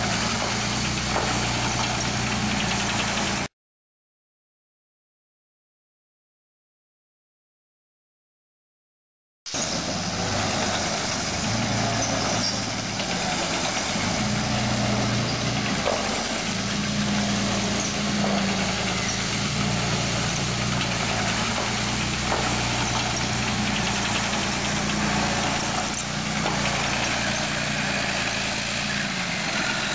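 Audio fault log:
No fault to log in this audio.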